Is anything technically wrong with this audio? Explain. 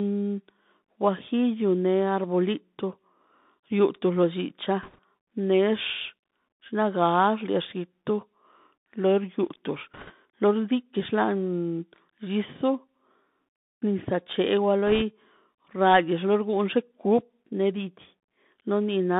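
Yes. The speech is carried over a Bluetooth CVSD headset codec for the whole clip. It also has three bursts of bit errors on a Bluetooth voice link.

The CVSD codec sends one bit per sample, stepping the waveform up or down with an adaptive step. That fits a 64 kbps stream. The band runs only from 150 Hz to 3.7 kHz. Loud bright sounds overload the steps, so sibilants turn scratchy over a grainy hiss.

The bit errors come at 4.83 to 4.99 s, just after "lo llicha"; at 9.94 to 10.13 s, between "lor yutox" and "lo xliti"; and at 14.87 to 15.02 s. A few percent of bits flip. Each bit nudges the signal only slightly, so there are no sharp clicks, just brief rushing crackle.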